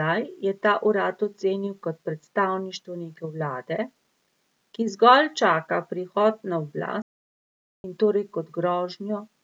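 At 7.02 s the input signal was likely lost while the recorder kept writing silence. This audio dropout to silence cuts the speech off abruptly, leaving a dead gap with no room tone until it returns at 7.84 s, 820 ms later.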